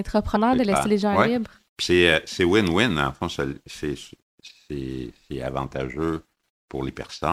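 A speech clip with compressed frames skipped, twice. The first jump comes at 0.35 s, just before "de laisser les gens". The second comes at 6.88 s. Each time, the audio leaps ahead by about 50 ms. That points to two whole 24 ms frames missing from the file or rejected as damaged by the decoder.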